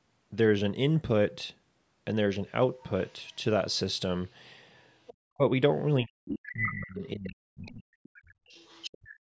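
A second voice briefly comes through at 3.07 and 5.06 s, well below the main speech. This is the other side's voice leaking through, likely loudspeaker echo the canceller left in the microphone. Unlike the suppression faults, it adds sound rather than removing it.

From 5.26 to 5.43 s and from 6.03 to 8.03 s, the main voice drops deeply. This is speech suppressed in double talk: the canceller likely mistook this talker for echo and turned the microphone down.

Within and after that stretch the leak returns, nearly as loud as the speech at 6.5 to 6.73 s. It is quieter at 7.68 s and from 8.04 to 9.08 s.

From 9.08 s to the end, about 0.2 s, the room sound falls by about 40 dB. This is background gated by the echo canceller, which differs from double-talk suppression because it dips the room sound rather than the voice.

The band stopping at 8 kHz comes from the call microphone processing.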